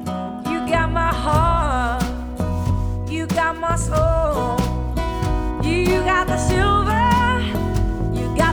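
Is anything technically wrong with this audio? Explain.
No, nothing technically wrong stood out on listening to this audio.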